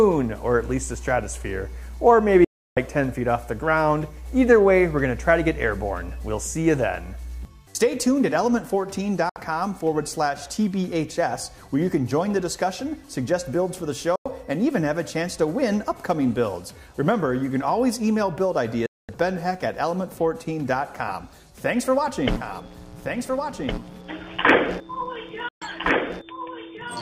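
At 2.44 s the sound cuts out until 2.77 s, a digital broadcast dropout. The receiver lost good frames and muted, with a quick 3 ms fade, for 320 ms. The same holes come back at 9.29 s (64 ms), 14.16 s (96 ms) and 18.86 s (224 ms). Everything in those gaps is simply gone, and the lengths fit 32 ms frames.

From 22.34 s to the end there's a doubled audio track. A full-band copy trails about a second and a half behind, roughly 5 dB quieter, and kicks in abruptly with no room colour. That's likely a second, slower capture path. A 128 ms dropout at 25.48 s also punches through.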